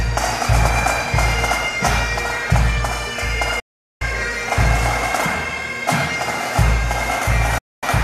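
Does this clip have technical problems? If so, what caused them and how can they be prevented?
Yes. Digital broadcast dropouts occur at 3.59 to 4.02 s and 7.58 to 7.83 s. Each time, the receiver stopped getting valid frames and muted with an 8 ms fade, so the audio sent during those gaps is lost. Better reception, with a stronger signal and a well-placed antenna, would prevent it.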